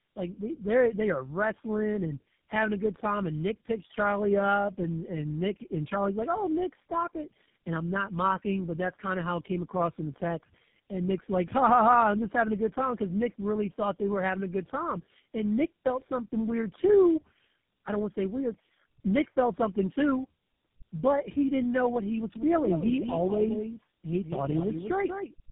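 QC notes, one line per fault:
Throughout: tandem speech coding. Rough, muffled, warbly sound with nothing above 3.8 kHz, worse than one codec gives, consistent with AMR-NB then GSM full-rate recoding stacked.
22.35 s to end, after "know what he was": doubled audio track. A dry, full-band copy about 5 dB down trails by roughly 200 ms and starts abruptly, unlike decaying room echo, likely a second capture path.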